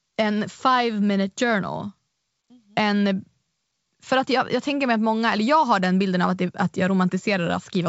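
Nothing stood out on listening to this speech, which comes through at the bandwidth of G.722 wideband telephone coding at 64 kbit/s.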